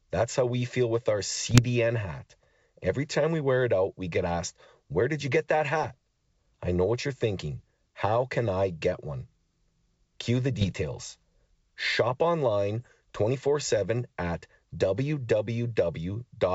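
Short bursts of popping and rough, gritty distortion with brief jumps in level break into the speech from 1.46 to 1.65 s, 10.60 to 10.73 s and 12.80 to 12.88 s. These are bit errors on an ADPCM link, here the G.722 wideband path, with something under a percent of bits flipped. Each wrong bit corrupts the decoder's step size and prediction, so the damage rings on for several milliseconds instead of staying a single click.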